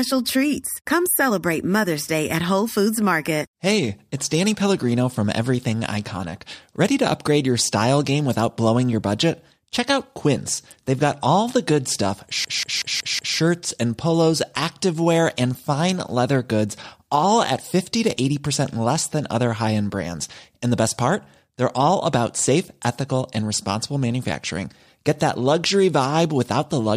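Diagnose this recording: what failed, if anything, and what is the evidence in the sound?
The driver or host stalled while the audio hardware kept cycling through its ring buffer, a system hang loop. From 12.45 to 13.38 s one 186 ms slice of speech repeats exactly five times at 5.38 Hz, a machine-gun stutter that fits an 8192-sample buffer.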